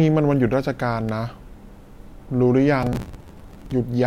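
A speech recording carries two distinct disturbances. At 1.09 s there is an electrical switching spike, a sharp snap laid over the voice that is likely from a nearby switch, motor or static discharge arcing into the line. It lasts only a couple of milliseconds and leaves the speech around it untouched, which separates it from a dropout or buffer fault, where the signal itself breaks. From 2.83 s to 3.72 s comes processor overload crackle: a gritty, tearing burst lasting close to 0.9 s. The processor fails to finish its small buffers, each about 5 ms, in time, and dozens of deadlines pass in a row. Every miss holds a fragment of old audio with hard edges. Unlike a switching spike, the damage is a dense, sustained texture tied to the audio stream that stops only when the load eases, not one isolated click.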